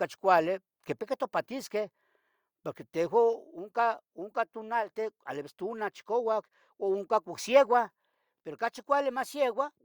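At 3.33 s the level of the whole speech clip drops in a single step, by about 2 dB, and stays there. Voice and background fall together, so it sounds like someone nudged a fader down rather than the talker easing off. That's the microphone volume stepped down: most likely the call software decided the input was running hot and pulled the device's input volume back in one move instead of riding it gradually.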